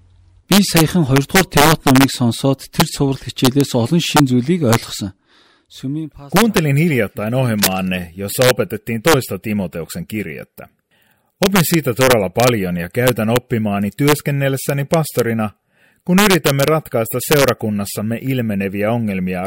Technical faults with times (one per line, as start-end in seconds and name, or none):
0.00-19.47 integer overflow
7.58-7.79 cable scratch noise